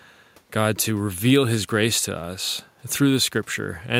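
No technical faults can be heard anywhere in this speech recording. There is nothing in it that needs to be marked at any point in time.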